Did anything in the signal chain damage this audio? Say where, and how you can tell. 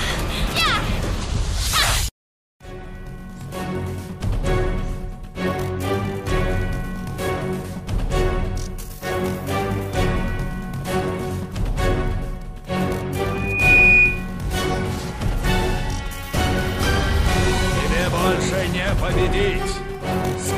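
Yes. From 13.30 to 14.28 s a loudspeaker feedback squeal takes over, a fault in the acoustic loop between playback and the microphone rather than in any digital stage. A single 2.5 kHz tone swells over roughly 0.4 s until it stands about 10 dB above the sound. Unlike mains hum or a steady interference whine, it is not present from the start: it grows by itself as the loop gain at that one frequency exceeds unity, then stops.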